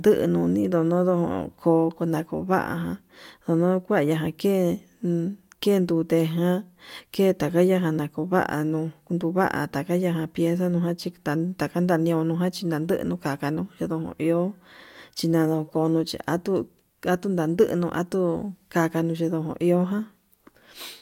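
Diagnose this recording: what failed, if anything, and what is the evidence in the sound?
No audible fault anywhere.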